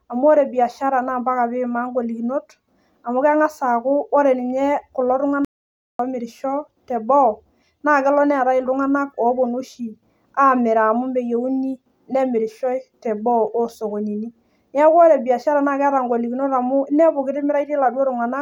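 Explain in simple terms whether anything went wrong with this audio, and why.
At 5.45 seconds the speech cuts out completely for about half a second. This is an audio dropout to silence, likely from a brief lost input connection.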